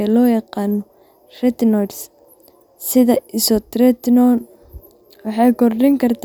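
A short recording of speech, with no technical fault anywhere in it. Nothing in the audio calls for a time, a cause or a repair.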